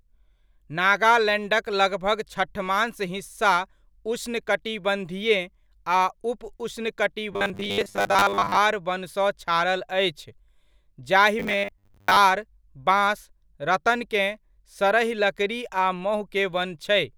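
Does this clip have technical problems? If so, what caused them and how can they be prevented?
Yes, there's robotic sound from repeated short buffers at 7.33 to 8.57 s, just before "वनसँ छारल अछि", and again at 11.39 to 12.16 s. It's a stiff metallic buzz at 100 Hz, likely from a starved stream looping a roughly 10 ms chunk in place of most of the real audio. Give the stream more buffering headroom so fresh audio always arrives in time.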